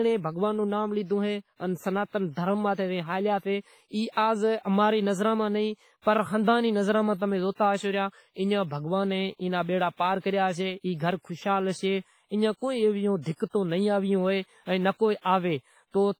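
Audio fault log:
Throughout, WMA compression, likely: the speech rings and smears, with a washy hiss swelling and fading alongside the signal. Heavy damage, consistent with about 24 kbps, zeroes weak spectral lines, and long transform blocks spread noise over tens of milliseconds, unlike short, crisp MP3 pre-echo.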